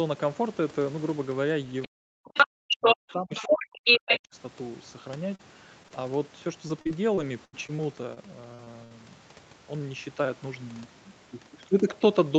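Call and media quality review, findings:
Far-end voice leaking through, 1.82 s (brief, about 20 dB under the talker), then 2.34–2.47, 2.70–3.13, 3.34–3.66 and 3.84–4.20 s, where it sits about 5 to 10 dB above the talker. Likely residual loudspeaker echo that the echo canceller did not remove from the mic.

Near-end speech suppressed in double talk: talker ducks out under the far-end voice at 1.86–2.96 s and 3.12–4.02 s, with dips of about 40 dB, and again at 4.22–4.35 s, about 25 dB. The AEC likely could not separate talker from echo during overlap and attenuated both.

Short concealed packet loss: brief smears or wobbles at 5.35–5.41, 5.83–5.86, 5.88–5.92, 8.54–8.60 and 8.64–8.68 s, each 20 to 40 ms of audio missing. The receiver's PLC extended the preceding sound across each hole, then crossfaded back.

Repeated packet loss (robotic sound): choppy stretch from 6.68 to 8.18 s, with 8 separate gaps totalling 240 ms, the longest 78 ms, about 15% of the span synthesised. 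Successive losses are patched by extending prior audio before the next gap arrives.

Burst of packet loss: concealed gap fading out at 8.84–8.92 s, 60 ms of audio missing. Consecutive loss or late arrival past the jitter buffer. Concealment sustained the last sound while ramping it down, and playback resumes further on. Top end stops near 8 kHz, consistent with wideband Opus on the call path.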